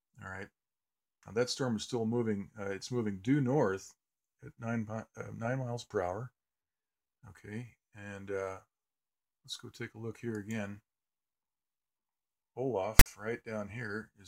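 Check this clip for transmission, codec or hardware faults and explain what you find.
One fault is present, near the end. From 12.99 to 13.06 s, file tags are played as audio: a block of text metadata followed by zero padding was decoded as sample data. The text bytes produce a brief, loud, lopsided rasp with abrupt edges, and the padding then drops to dead silence.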